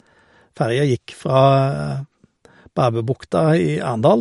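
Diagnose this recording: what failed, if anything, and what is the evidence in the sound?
Watery swirl throughout and nothing above 11.2 kHz point to the codec stage. This is likely MP3 compression around 48 kbps, cutting the treble and switching weak frequency lines on and off.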